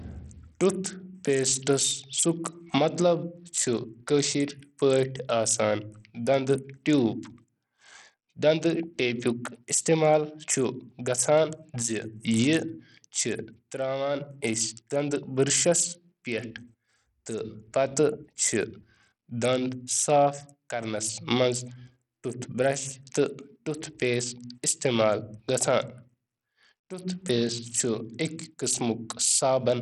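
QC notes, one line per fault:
throughout, Bluetooth SBC compression: the speech's treble flickers and drops out in patches, with gritty noise and aliasing riding on it, likely from a starved SBC bit pool fitting about 64 kbps. Unlike a fixed low-pass, the band reaches about 21 kHz.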